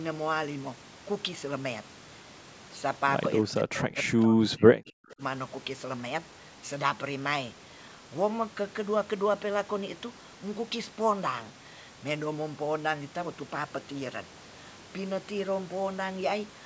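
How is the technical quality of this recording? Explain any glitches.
One glitch stands out. From 3.43 to 5.22 s, speech suppressed in double talk dips: an echo canceller likely ducked the talker along with the loudspeaker echo, up to about 40 dB, leaving waveform dips and faded spectrogram strips.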